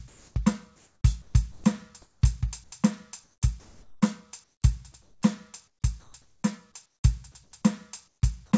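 From 0.08 to 2.72 s the music is chopped by the voice detector, likely because the sender's speech detector kept toggling transmission on and off across the passage. About 1.08 s in total is swapped for comfort noise, so quieter notes and decays drop out. On a spectrogram this shows as repeated gaps where detailed harmonic structure gives way to smooth, flat noise blocks. The waveform shows the envelope collapsing abruptly to a thin, even band.

Comfort noise in place of the background appears from 3.24 to 7.52 s, covering about 1.74 s, and again from 8.08 to 8.22 s for 0.14 s. In both spans the sender has stopped sending, likely because it judged the passage silent, and the receiver fills the pause with steady synthetic hiss. In the later span the real background sits about 49 dB below the loudest music, and the fill comes in about 6 dB lower still, so the room tone sinks and flattens. 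The spectrogram shows featureless, evenly textured noise with no fine detail, topping out at 8 kHz like the rest of the G.722 call audio. The waveform shows a low, uniform band with no transients.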